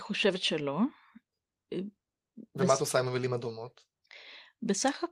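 Speech recording with no audible technical faults.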